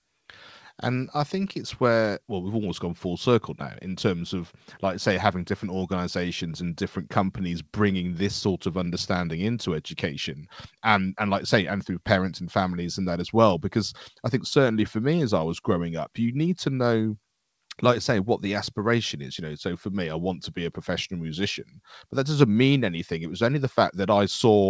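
Nothing's actually wrong with this one: it's speech that came over a call, and the top end stopping at 8 kHz fits a G.722 call path doing what it's meant to.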